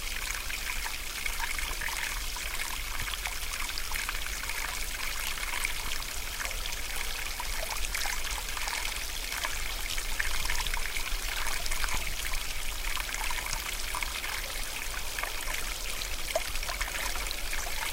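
Overlapping chunks in a sound clip: the audio was handled in 2-second chunks, each starting about 23 ms before the last ended, so that slice repeats as a stutter or click at 1.83–1.85, 3.85–3.88, 5.88–5.90, 9.92–9.95, 11.95–11.97, 13.97–13.99 and 15.99–16.02 s.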